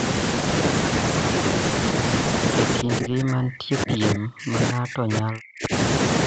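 From 2.82 to 5.73 s, likely speech suppressed in double talk from the echo canceller: the speech drops by up to about 40 dB.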